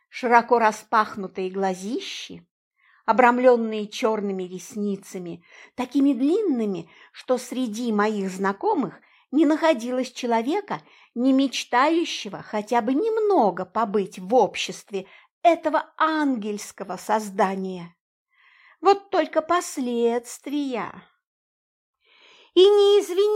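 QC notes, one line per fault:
No technical faults were heard anywhere in the signal.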